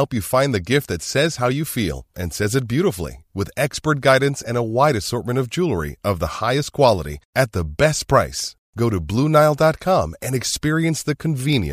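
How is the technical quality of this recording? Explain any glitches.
The recording is marred by word clock ticks. A digital link was read by a device running on its own clock, drifting roughly 15 ppm from the sender's, so about every one and a half seconds a single sample slipped. This produces around seven sharp, uneven ticks from 0.95 s, just after "you find the gift", to 11.53 s.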